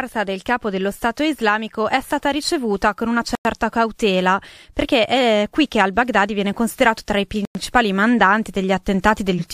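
At 3.35 to 3.45 s, after "stata ricevuta con una", and again at 7.45 to 7.55 s, after "viene considerato tra i", the speech stops dead for 100 ms: a gap between chunks. Playback arrives in 4 s pieces with silence inserted at each join, so nothing is lost. Unlike skipped frames, these holes have hard edges and recur on a regular spacing.

At 9.37 to 9.40 s, compressed frames are skipped. Roughly two frames, about a tenth of a second of speech, are simply missing, which fits a frame length near 46 ms. The audio jumps ahead by that amount at the join.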